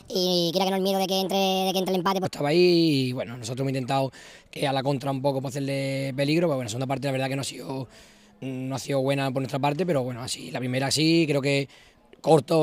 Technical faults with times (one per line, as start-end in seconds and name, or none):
0.00-2.25 section at the wrong speed